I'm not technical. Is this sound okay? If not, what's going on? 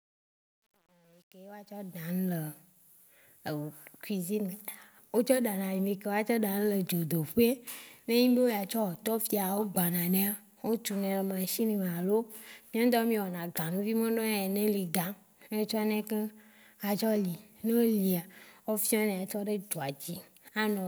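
No. There is truncation distortion on the fade-in at the start of the speech. From 0 to 2.11 s the level rises, but the quiet part sounds gritty. It is worst from 0 to 1.84 s. The volume change was done with too few steps of loudness, which fits about 9 bits, so the sound turns blocky when it is very soft.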